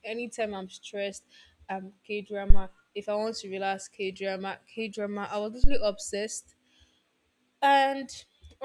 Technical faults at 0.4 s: none

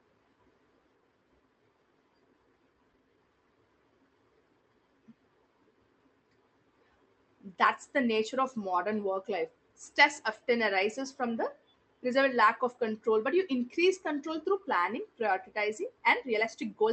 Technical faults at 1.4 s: jitter buffer speed-up

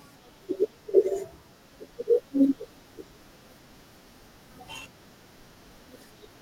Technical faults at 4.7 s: periodic USB or driver dropouts

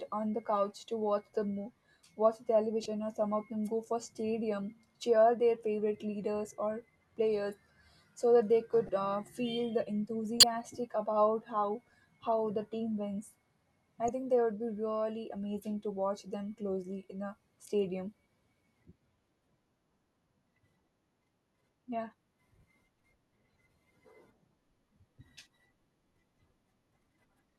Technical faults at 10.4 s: corrupt frame decoded

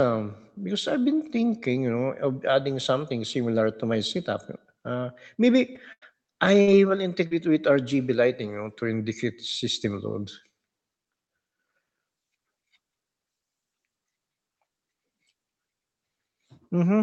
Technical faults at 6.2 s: repeated packet loss (robotic sound)

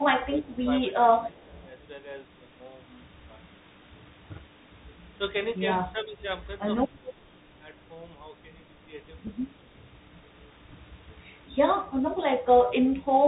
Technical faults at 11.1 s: Bluetooth CVSD headset codec; Bluetooth headset packet repeated

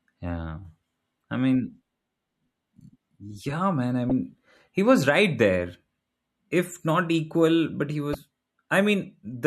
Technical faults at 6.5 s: none

